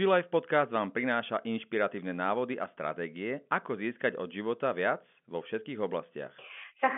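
This is a speech clip, and nothing is technically wrong with it.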